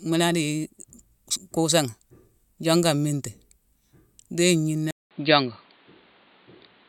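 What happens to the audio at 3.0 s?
Nothing goes wrong at 3.0 s; the speech carries on intact through that moment with no audible fault.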